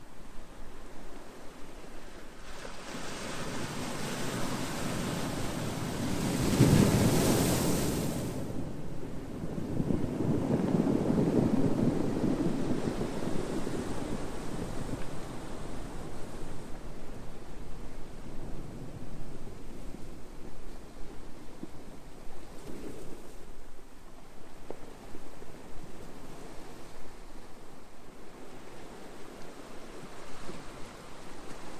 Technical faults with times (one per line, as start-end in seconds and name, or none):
none